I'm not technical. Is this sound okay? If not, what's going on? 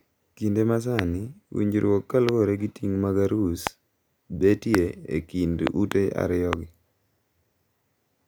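No, there's a recurring loud pop over the speech at 0.99, 2.29, 3.67, 4.75 and 6.53 seconds, plus a quick double pop between 5.67 and 5.94. The talking carries on underneath. It's likely a brief electrical jolt, like a bumped plug, switch or static.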